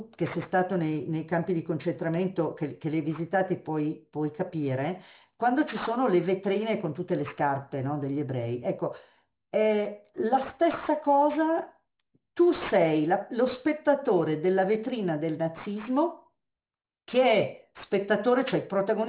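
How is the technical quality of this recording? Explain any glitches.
The recording is marred by aliasing that runs through the whole clip. The sample rate was lowered without an anti-aliasing filter first, which fits a drop to 8 kHz. Content above the 4 kHz folding point was mirrored back below it, landing at false, unrelated frequencies. The folded energy sits roughly 20 dB under the speech. Sibilants sound gritty and metallic, and the spectrum is packed right up to the 4 kHz edge.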